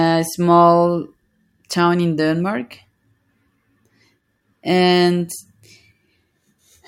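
No technical faults are audible.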